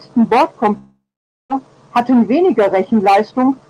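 At 0.77 s the speech cuts out until 1.52 s, most likely a long network dropout. The last sound gets stretched into a fading buzz, then there's about half a second of near-silence, and when the audio resumes roughly 400 ms of it is simply gone.

From 1.59 s to 3.69 s you get a jitter buffer speed-up. The receiver is trimming tiny pitch-period chunks to shed the extra delay, around 200 ms in all, so the speech plays about 10% fast at unchanged pitch and sounds a bit rushed.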